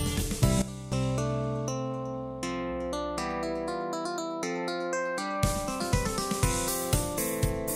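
At 0.62 s the music abruptly drops about 13 dB, then snaps back at 0.92 s, a sudden gain jump, likely from a gain setting applied without any ramp.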